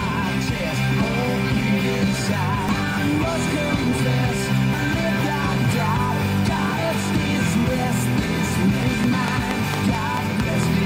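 At 2.69, 4.74, 6.78 and 8.83 s, damaged data in the compressed stream makes the decoder lose sync and hunt for the next frame header. Each is a single short glitch, evenly spaced about 2.05 s apart, not a repeating tick.

From 9.04 to 10.64 s a train of clicks follows: about seven similar pops at a steady 4.4 per second, standing well above the sound. They likely come from interference or a faulty connection or power supply. Unlike the decoding faults, nothing skips and the pulses keep much the same shape.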